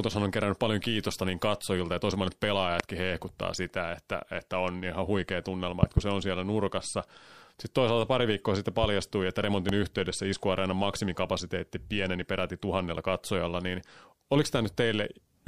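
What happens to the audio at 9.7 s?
A loud pop hits from 9.69 to 9.72 s, well above the speech, just before "yhteydessä iskuareenan maksimikapasiteetti pieneni", likely a voltage spike from a plug, switch or static.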